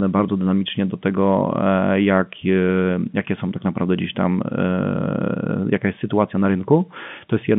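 No faults can be heard anywhere in this speech clip. It comes through a G.711 telephone path working as it should, so the sound is held to a narrow line band of roughly 150 Hz to 3.5 kHz, with at most a faint coding grain riding on the signal.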